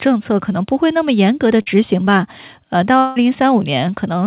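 At 1.62 to 1.68 s there is a short concealed packet loss: about 40 ms of audio was lost and patched by extending the previous sound, heard as a brief smear. On a spectrogram it appears as a short run of smoothed, repeated harmonics. From 2.98 to 3.18 s, a stretch of about 180 ms, the sound turns into a fading buzz or hiss, most likely a long network dropout concealed by synthesis. The waveform shows a decaying pattern with no silent gap, and throughout the call nothing appears above 4 kHz, consistent with G.711 A-law at 64 kbps.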